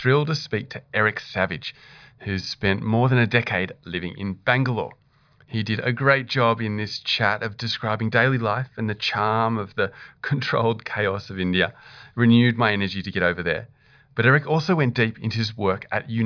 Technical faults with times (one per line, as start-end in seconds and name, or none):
none